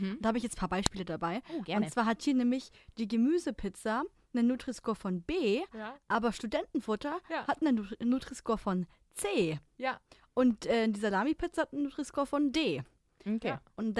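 At about 0.86 s, right after "ich jetzt ein paar", there's a sharp, loud click that cuts across the speech. That's a file header played as audio: it sounds like a second WAV piece was spliced or streamed in without its header being stripped, so those few dozen bytes of metadata got read as sample values. The result is a brief snap that has nothing to do with what the speech is doing at that moment.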